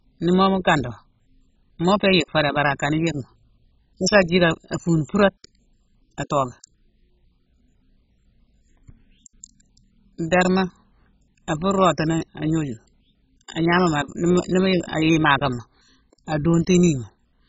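Throughout, the speech is dull with nothing above 7.5 kHz and a heavy gurgling, granular texture, likely MP2 compression at a very low bitrate that starves and switches off upper sub-bands.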